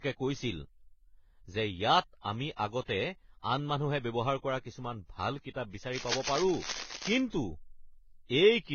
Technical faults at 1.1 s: transcoding between lossy codecs

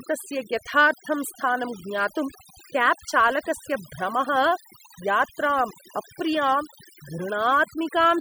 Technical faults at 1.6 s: overdone noise removal

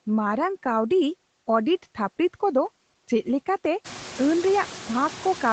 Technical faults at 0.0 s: noise suppressor artifacts

